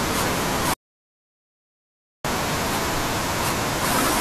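Speech runs normally until 0.74 s, when it breaks off and is replaced by dead digital silence until 2.25 s, roughly 1.5 s of lost material. This is an audio dropout to silence, likely from the input being disconnected or muted while recording carried on writing zeros. The waveform shows a near-flat line across the gap, and the spectrogram shows a blank vertical band with no room tone at all.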